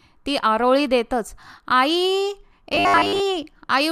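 From 2.72 to 3.20 s the speech collapses into robotic sound from repeated short buffers. For about half a second the voice becomes a rigid, metallic buzz fixed at 100 Hz, loosely following the syllables. The likely cause is audio arriving too seldom, with the playback side looping the last 10 ms block to fill the gap. Most of the real signal in that stretch is skipped rather than delayed.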